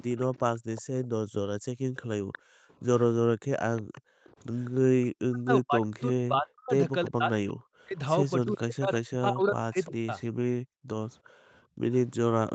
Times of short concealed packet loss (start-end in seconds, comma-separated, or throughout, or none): none